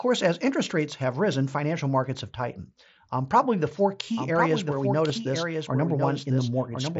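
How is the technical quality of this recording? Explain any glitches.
The recording has two glitches, heard through a wideband Bluetooth headset link using the mSBC codec, which limits the sound to 8 kHz and adds light graininess on loud passages.

From 4.15 s, right after "probably the four", a doubled audio track begins and runs to the end. A second full-band copy trails about a second behind, roughly 5 dB quieter. It starts abruptly, with no room colour. A slower second capture path is the likely cause.

At 5.09 s there is a concealed Bluetooth headset packet loss. A single 7.5 ms packet went missing. The receiver filled the gap by repeating a well-matched stretch of the preceding waveform. As a lone loss, it is nearly inaudible.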